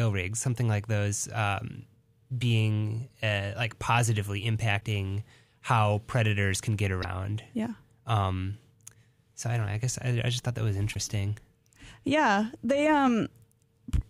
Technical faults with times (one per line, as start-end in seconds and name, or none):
4.77-4.82 damaged data in a compressed stream
6.99-7.04 damaged data in a compressed stream
10.91-10.96 damaged data in a compressed stream